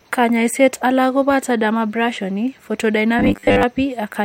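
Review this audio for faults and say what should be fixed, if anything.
From 3.19 to 3.63 s the speech turns into a rigid, metallic buzz pitched at 100 Hz, still loosely tracking the words. This is robotic sound from repeated short buffers, likely caused by audio arriving too slowly for playback, so the software keeps replaying its last fragment while most of the real signal, roughly 70 percent, is skipped. A 100 Hz buzz fits a repeated segment of about 10 ms. To prevent it, enlarge the jitter or playback buffer so brief delivery stalls no longer force fragment repetition.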